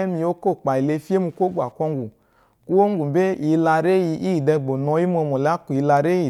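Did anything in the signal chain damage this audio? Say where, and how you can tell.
Yes, Wi-Fi interference in the analogue wiring. A faint tick repeats every 102.4 ms throughout the speech. A nearby radio's beacon is being rectified by the circuit.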